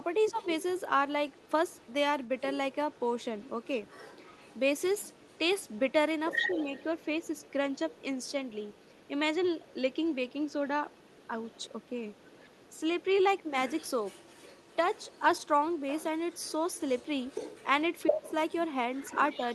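A speech recording with a faint second voice running under it from start to finish, the other side's voice leaking through well below the talker, roughly 20 dB down. It is likely residual loudspeaker echo the canceller missed, and it persists throughout. The speech is also suppressed in double talk at 0.31–0.45 s, 12.73–12.80 s, 13.43–13.53 s and 18.09–18.29 s. The talker briefly dips by around 10 dB, nearer 15 dB at the last, likely because the canceller ducked both voices while they overlapped, rather than from a dropout.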